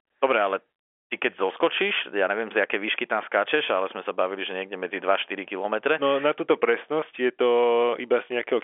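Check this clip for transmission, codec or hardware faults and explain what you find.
Nothing stood out on listening to this telephone-band speech.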